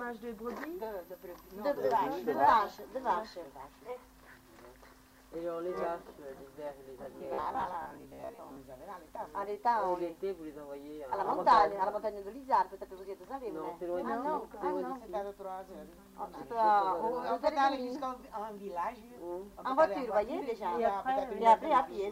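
From 7.04 to 8.60 s the audio turns into a rigid, metallic buzz pinned at about 66.8 Hz, the robotic sound from repeated short buffers. About half the real audio is skipped. The likely cause is roughly 15 ms chunks being looped when data arrives too seldom. Unlike plain dropouts, it never goes silent.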